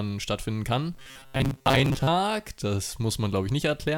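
Speech, with robotic sound from repeated short buffers from 0.94 to 2.08 s, right after "stattfinden kann". A rigid metallic buzz near 133 Hz replaces most of that stretch, likely from audio arriving too seldom so a roughly 7.5 ms slice loops. A spectrogram shows evenly spaced horizontal harmonics; the waveform shows identical cycles repeating.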